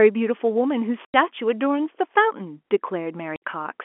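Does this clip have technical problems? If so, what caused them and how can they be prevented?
Yes. The speech drops out abruptly twice, from 1.05 to 1.14 s and from 3.36 to 3.42 s, each gap with hard edges. This is packet loss filled with silence. Runs of packets never arrived, and the receiver played dead air in their place. The 90 ms and 60 ms holes fit three and two lost 30 ms packets. The G.711 telephone coding keeps its usual narrow band up to about 3.4 kHz. A jitter buffer with packet-loss concealment or forward error correction would prevent these holes.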